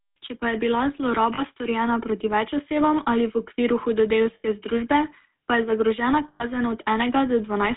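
The speech has a buzzy, gravelly roughness from start to finish, and everything above about 3.6 kHz and below about 150 Hz is missing, leaving a thin, boxed-in telephone sound. This is the GSM full-rate codec, and the damage is plainly audible. It rebuilds the voice from a vocal-tract model fed by a sparse, regularly spaced pulse excitation. That coarse excitation produces the grit, which fits the 13 kbit/s full-rate coder.

Three times the sound freezes into a brief metallic ring. The first is from 1.34 to 1.42 s, between "pa je bila" and "storjena proti več osebam". The second runs from 4.34 to 4.45 s, and the third from 6.28 to 6.44 s, just after "je zagrožena". These are lost GSM frames. During each gap, lasting about 40 ms, 100 ms and 120 ms, the decoder keeps reusing the last good frame's settings, so the ringing drone stands in for the missing speech.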